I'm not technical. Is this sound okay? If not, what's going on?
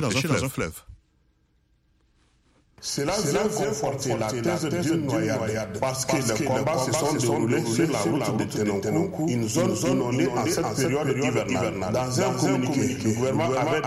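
No. A doubled audio track runs through the whole clip: every sound is followed about a third of a second later by an identical copy, just as loud as the original. The copy is clean, with no fading tail or room echo, so it sounds like a second playback slightly out of step rather than a natural echo. This is likely caused by the audio being captured twice, once through a slower route, and mixed together.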